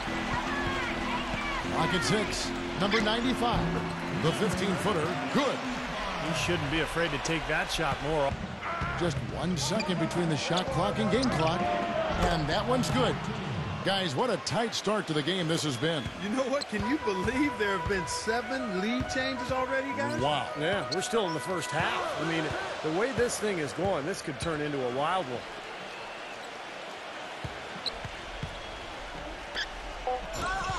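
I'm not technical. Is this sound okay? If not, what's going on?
Yes, there's nothing technically wrong with this sound that a listener would notice.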